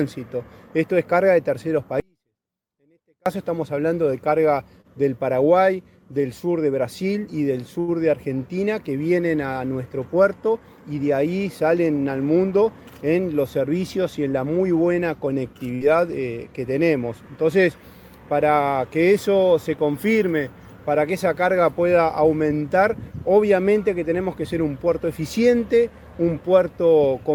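From 2.0 to 3.26 s the audio drops out to a faint residue about 40 dB down, likely a lost input with the path still live; the waveform collapses abruptly to a thin flat band.

At 4.81 s and from 7.8 to 7.91 s, short stalls from late packets stretch the last sound by 29 and 76 ms. Nothing is lost, but each shows as a smeared, repeated stretch on the spectrogram.

From 12.36 to 13.2 s, a jitter buffer speed-up trims around 70 ms of pitch periods, running the audio 107% fast at unchanged pitch. The harmonics stay level while events crowd closer together.

From 15.75 to 15.84 s, a burst of packet loss leaves a 56 ms decaying concealment tail and 60 ms missing, visible as a fading smear before a jump.

From 26.23 to 26.53 s, a second speed-up runs at 109%, removing roughly 40 ms.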